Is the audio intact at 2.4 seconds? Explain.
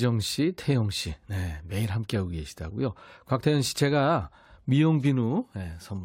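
Yes, at 2.4 seconds the speech plays through without any dropout, click, distortion or other audible fault.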